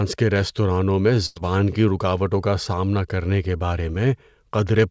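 A speech recording carried over a call link, with no content above 8 kHz, which fits a wideband codec such as G.722. The main fault is a burst of packet loss from 1.26 to 1.38 s, right after "کے ریستورانوں میں". About 100 ms of audio never arrived. The receiver extended the last sound for roughly 97 ms and let it fade, so a held buzz or hiss replaces real speech. Playback then jumps ahead to "کی رکاوٹوں کا سامنا", with that stretch gone. A second, smaller fault is short concealed packet loss from 3.92 to 3.96 s, just after "سامنا کرنے کے بارے". Here only about 20 ms went missing. The decoder patched it with roughly 21 ms of predicted sound, then blended back into the real signal. The result is a brief smear or wobble, and a short consonant there may be lost.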